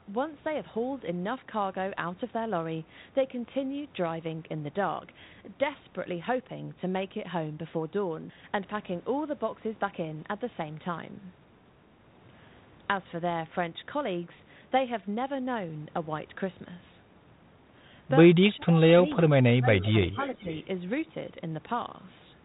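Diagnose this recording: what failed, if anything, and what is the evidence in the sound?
Between 18.56 and 20.49 s the speech repeatedly dips and thins: 18.56–18.8 s (a drop of around 15 dB), 19.04–19.1 s, 19.3–19.94 s (deepest, around 20 dB), 20.11–20.19 s and 20.35–20.49 s (shallow, around 5 dB). This is speech suppressed in double talk in the call-processing stage, likely an echo canceller that attenuated its own talker while the far end was also speaking.

At 19.8–19.9 s and again at 20.07–20.65 s a faint delayed copy of the speech trails the original by 449 ms, about 20 dB and then about 30 dB below it. This is echo leak, likely residual loudspeaker pickup that a far-end echo canceller failed to remove and sent back down the line.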